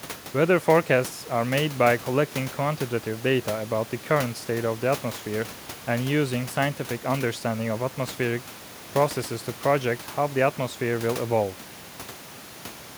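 The speech comes through with no technical faults, only a low room noise from the recording space sitting about 20 dB below the voice.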